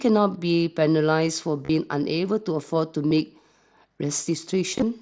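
Concealed Bluetooth headset packet loss occurs three times in this speech, carried over the mSBC headset codec. Voice packets from headset to phone went missing, and the receiver filled each gap by repeating a matching recent stretch of waveform. From 1.65 to 1.69 s and from 3.08 to 3.11 s, runs of about 38 ms and 30 ms become a brief buzzy, held tone with a slight warble as real sound resumes. From 4.71 to 4.82 s, shorter losses scattered over about 105 ms, none longer than 15 ms, are nearly hidden.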